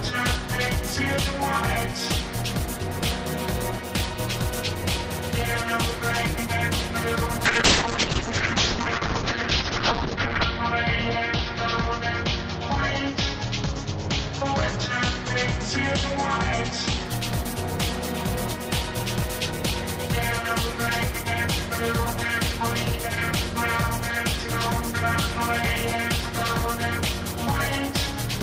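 From 7.46 to 17.11 s there's a call bitrate drop. The bandwidth estimate fell, so the encoder codes far more coarsely, which fits roughly 40 kbps sinking to about 7 kbps. The top end shrinks from 20 kHz to 8 kHz, leaving it muffled and watery, worst for about 3 s.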